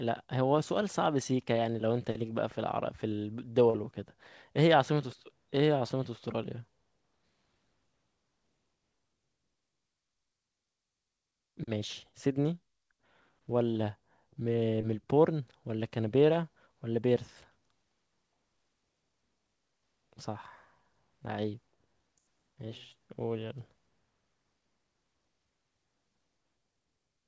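At 3.70 s, around 40 ms of the call arrived too late for the decoder, a short concealed packet loss lasting until 3.76 s. The receiver bridged about 38 ms of it by extending the preceding sound, carrying its pitch forward where it was voiced or substituting shaped noise where it was not, before crossfading back into the real signal. The result is a brief smear or wobble, and a short consonant there may drop out. The call path's band limit, with nothing above 8 kHz, fits G.722.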